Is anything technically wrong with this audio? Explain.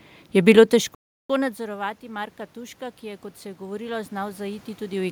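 Yes, there are two technical faults.

Automatic gain rising, from 0.71 s to the end of the clip: shortly after the talker moves away from the microphone at about half a second in, the input level drops by about 24 dB. The gain control treats this as too quiet a signal and steadily turns its gain back up. The voice and the room noise swell together over several seconds, climbing to the end of the clip rather than settling at a steady level.

Playback stall, from 0.95 s to 1.30 s: the sound cuts to silence in mid-flow for about 0.35 s, then resumes. This is most likely the player running short of buffered data, or its playback thread being held up, so nothing reached the output until it caught up. The result is an abrupt hole in the speech.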